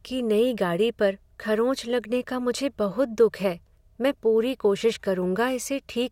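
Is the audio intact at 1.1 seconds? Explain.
Yes, the speech is intact at 1.1 seconds, with no audible fault at that moment.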